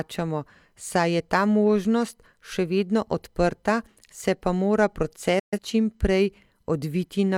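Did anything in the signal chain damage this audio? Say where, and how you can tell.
Yes, a digital broadcast dropout at reception. The speech fades out within 8 ms at 5.39 s and is silent until 5.59 s, which fits a few failed frames being muted.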